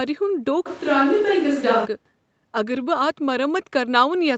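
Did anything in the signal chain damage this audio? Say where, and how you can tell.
Yes. From 0.68 to 1.84 s the sound turns roomy and hollow, likely from a switch to a distant microphone. On the spectrogram the bass thins and a raised room-noise floor fills the gaps, while the waveform level barely changes.

At 3.55–3.57 s, a 20 ms lost packet rebuilt from error correction by the Opus decoder leaves no gap in the waveform, just a brief, rougher, noisier smear on the spectrogram.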